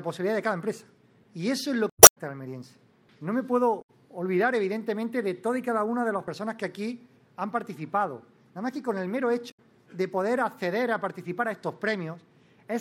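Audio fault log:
1.90–2.18 s, 3.78–3.90 s, 9.47–9.59 s: damaged data in a compressed stream. Each is a chirp, squawk, click or short hole that breaks into the sound. Corrupted bytes in the encoded stream make the decoder misread those frames, lose sync, and resume only at the next valid frame header.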